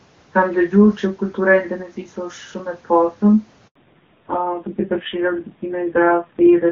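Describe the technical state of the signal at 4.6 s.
At 4.6 s the signal is inside a fallback to narrowband that begins at 3.75 s and runs to the end of the clip. The call has dropped from the HD Voice wideband codec, which up to 3.75 s sounds clean at what fits a 23.85 kbit/s rate, to a narrowband codec, and everything above 4 kHz is gone. The speech sounds muffled and boxy, with a rough, buzzy texture that points to a low rate near 5.9 kbit/s.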